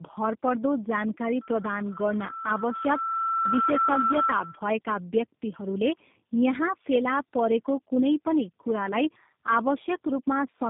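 Speech, and the whole thing suffers from tandem speech coding: it sounds like three speech codecs in a row, ending at G.729A, each re-coding the last one's mangled output. The result is rough, muffled and warbly, with nothing above about 3.6 kHz.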